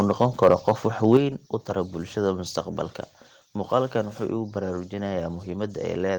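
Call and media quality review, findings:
Microphone overload, 0.00–0.72 s and 1.04–1.17 s: crackling, flat-topped peaks about 5 dB, then about 3 dB, over full scale. Likely input gain set too high for the converter.

Microphone volume stepped down, 1.17 s: speech and background fall together by about 6 dB right after the clipped peak. Likely call software reducing device input gain.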